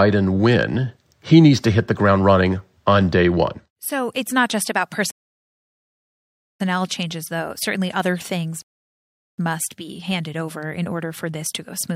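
At 5.11 s, right after "it's not just about", the speech cuts to silence for about 1.49 s and picks up again at 6.60 s with "changes though". This is a rebuffering stall: playback drained its store of downloaded audio and waited for more data. A second stall follows at 8.62 s after "other things", adding about 0.76 s before "must be handed over" resumes at 9.38 s. Both times, nothing is skipped; the gaps only stretch the timeline.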